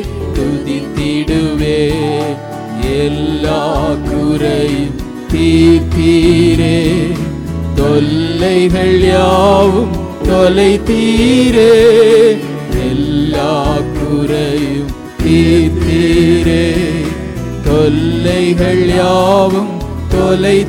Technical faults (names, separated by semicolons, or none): none